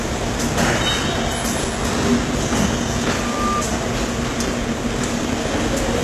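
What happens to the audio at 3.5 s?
A loudspeaker feedback squeal is sounding at 3.5 s. It runs from 3.08 to 3.65 s. A microphone is picking up the loudspeaker it feeds. At 1.2 kHz the loop gain exceeds one, so that tone keeps growing on its own. It swells over a little under half a second. By 3.5 s it is a steady whistle about as loud as the sound beneath it. It stops at 3.65 s.

The same moment also carries damage from the compression heard throughout. Nothing is present above 12.3 kHz. The treble that remains sounds synthetic, gritty and metallic, with harmonics that do not line up. The likely cause is HE-AAC compression. It codes only the lower spectrum and rebuilds the top by copying lower bands upward under a coarse envelope. The damage is plainly audible, which fits a very low bitrate around 16 kbps.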